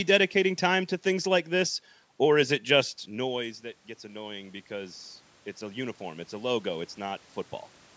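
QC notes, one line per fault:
3.06 to 7.31 s, automatic gain rising: right after "or is it just" the talker drops back and the input falls by about 15 dB, so the AGC slowly winds its gain up by about 8 dB, pulling the voice and the room noise up together in one gradual swell.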